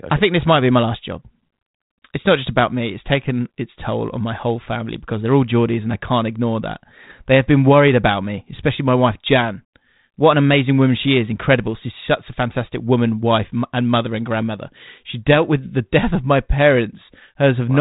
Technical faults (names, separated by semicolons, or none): none